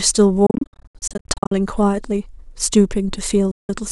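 From 0.46 to 1.52 s the speech breaks into many short silences, longest 73 ms; another 0.17 s gap hits at 3.51 s. Likely Bluetooth dropout: late packets discarded. Waveform and spectrogram show sharp-edged blank columns.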